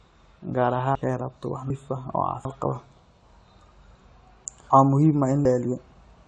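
Speech that has passed through two lossy codecs: nothing is left above 11.3 kHz, and two kinds of coding artefact sit together. That combination suggests transcoding between lossy codecs, most likely MP3 followed by AAC-LC at low rates around 48 kbit/s. A single encoder would leave one consistent artefact character, not these layered on top of each other. The sound also skips at 0.95, 1.70, 2.45, 4.70 and 5.45 s. Each skip drops about a third of a second and joins the two sides directly, with no silence. This is audio missing between chunks, likely from a recorder handling one-second chunks and losing time at each handover. Unlike random packet dropouts, which fill the gap with silence or concealment, these land on a steady 0.75 s grid and simply cut out.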